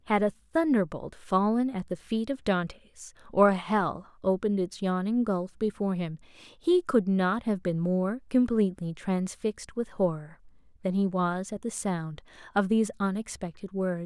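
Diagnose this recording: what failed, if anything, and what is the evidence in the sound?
Nothing failed; no fault is audible anywhere in the recording.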